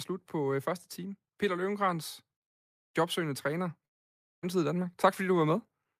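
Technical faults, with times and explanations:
3.13 to 5.66 s, automatic gain rising: the level climbs smoothly by about 4 dB over roughly two and a half seconds, with the speech and the background noise floor swelling together. The gain control has judged the input too quiet and is easing its amplification upward. A fader move or a louder talker would lift only the voice or would change abruptly. Here the whole signal, noise included, rises slowly.
3.85 to 4.45 s, long network dropout: the speech breaks off and about 0.58 s of it never returns. The gap is filled for around 0.57 s, and what fills it is essentially silence before the audio resumes further along, with the missing stretch simply skipped. The likely cause is a long interruption in the incoming stream. A brief packet loss would leave only a tiny click or smear. This gap is long enough to lose a whole chunk of the speech.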